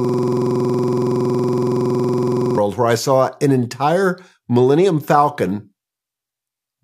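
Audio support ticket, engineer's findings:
System hang loop, 0.0–2.58 s, already under way at clip start: driver or host froze while the audio device kept replaying its ring buffer. A 46.44 ms slice repeats exactly, about 54 times, giving a steady buzz near 21.5 Hz; fits a 2048-sample buffer. Speech resumes at "where I saw an".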